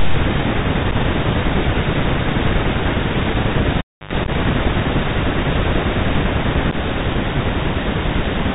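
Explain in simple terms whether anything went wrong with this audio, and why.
The whole recording passed through a Bluetooth headset link using the CVSD headset codec, an old phone-call format that describes the sound as a simple stream of up-or-down steps and throws away everything above about 4 kHz. Here the damage is plainly audible: the speech sounds narrow and muffled like a phone call, with a fine grainy hiss underneath, scratchy s sounds, and roughness whenever the voice gets loud and bright.

Three times, the little radio packets carrying the audio from headset to phone went missing and nothing filled the gap. This is unconcealed Bluetooth headset packet loss. At 0.91 to 0.93 s only a couple of packets dropped, leaving a tiny hole with abrupt edges. At 4.24 to 4.30 s and 6.71 to 6.74 s several packets were lost in quick bursts, so the speech briefly breaks up into a rough, chopped crackle with abrupt edges.

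Between 3.78 and 4.13 s, a live audio cable was pulled out and pushed back in. You hear a pop as it comes loose, then roughly 0.3 s of near silence. While the plug is only half in, a short burst of low 50 Hz mains buzz, lasting under a tenth of a second, leaks in before a second pop as the sound returns.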